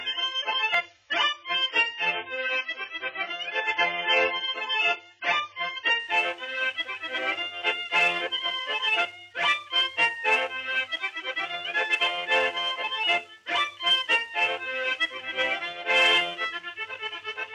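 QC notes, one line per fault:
0.00–6.00 s, adaptive stream starting at a low bitrate: the player opens on a lean version, leaving the treble missing or synthetic and heavier coding artefacts, which fits AAC at 16 kbit/s, then switches without a gap to a cleaner stream, consistent with 96 kbit/s.
0.74 s, dropped buffer (overrun): the sound jumps ahead by a few milliseconds, with no silence in between. The likely cause is samples not being collected before the hardware overwrote them, so the surrounding audio is joined directly.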